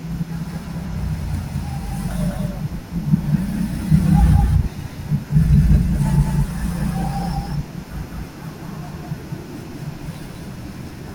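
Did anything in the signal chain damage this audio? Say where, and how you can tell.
Yes. Throughout the speech there is a doubled audio track: a second, full-band copy of everything trails the original by about 200 ms at close to the same level, with no reverberant tail or room colour. On a waveform every burst appears twice at a fixed offset; a spectrogram shows each pattern repeated, shifted along the time axis. The likely cause is a routing or capture-path problem, such as monitoring looped back through a slower path, that mixes the signal in twice.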